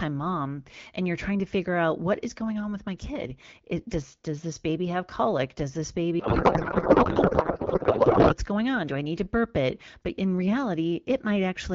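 From 6.19 to 8.34 s, right up to "going on", the speech collapses into garbled warble that barely tracks it. That's a codec payload misread: the AMR-WB stream, which sounds like 12.65 kbit/s, was probably packed octet-aligned but unpacked as bandwidth-efficient.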